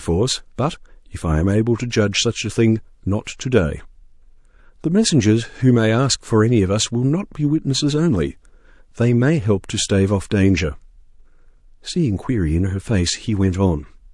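Speech runs through the whole clip with a watery, swirling texture. Metallic chirps flicker on s sounds, which is plainly audible codec damage, likely from MP3 compression at a low bitrate around 48 kbps. A simple low-pass filter would only dull the sound. What marks this as MP3 is the way weak frequency lines blink on and off from frame to frame. Separately, three attacks show pre-echo, each preceded by a short hiss that smears its onset: at 0.56 s (27 ms, noise up about 10 dB), at 3.24 s (27 ms, up about 17 dB), and at 3.37 s (23 ms, up about 14 dB). The encoder spreads the noise meant for the loud attack across the quiet moment before it within the same block. Spreads of this length fit a long transform block of about 48 ms that never switched to short blocks. Unlike the continuous swirl, pre-echo is a brief burst of noise placed just before a sharp onset.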